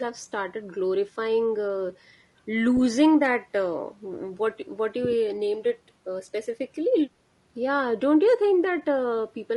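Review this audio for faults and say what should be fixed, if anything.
Throughout the speech, the sound is rough and grainy, with noise between harmonics and a dulled top band, likely low-delay AAC compression at a bitrate around 32 kbps. Short codec frames resolve pitch poorly. Raise the bitrate or use a longer-frame codec when low delay isn't essential.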